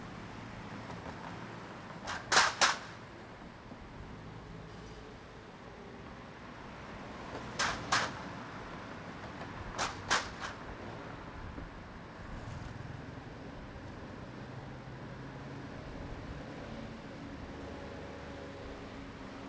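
Nothing stood out on listening to these sounds, which come through a wideband call path that carries no content above 8 kHz.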